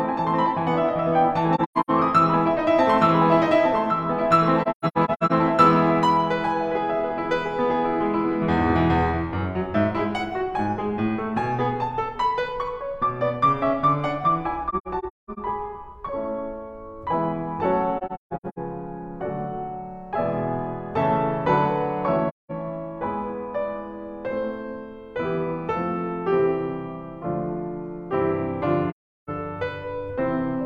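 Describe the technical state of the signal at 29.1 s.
At 29.1 s the music is silent. This is AAC frame loss with muting, running from about 28.89 s to 29.30 s. A run of compressed frames went missing, and the decoder filled their spectrum with zeros. The gap lasts about 384 ms, which fits roughly nine lost frames. The overlapping transform windows fade the music out at the start of the gap and back in at the end. The result is a soft-edged hole in the sound.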